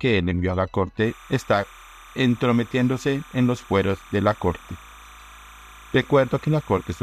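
From 1.05 s to the end, a steady chirping warble sits well below the sound, switching between pitches around 1 kHz and 2 kHz. This is timecode bleed: linear timecode, which fits 29.97 frame-per-second code, leaking in from a neighbouring track or cable.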